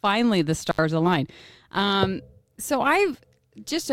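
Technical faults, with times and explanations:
0.68 to 0.79 s, intermittent contact: a loose connection opens for about 73 ms, so the speech drops out between crackles at each edge, leaving faint hiss. The waveform shows a sudden near-flat gap framed by spikes; the spectrogram shows broadband vertical clicks around a dark band.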